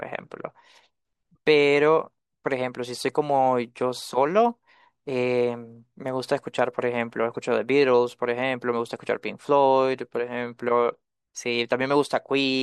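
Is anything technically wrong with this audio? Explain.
Yes. At 7.34 s the speech carries a brief, faint chirp, a quiet blip. This is a corrupt frame decoded: flipped bits in a few compressed frames were played anyway, so misread codes and gains briefly put energy at wrong frequencies.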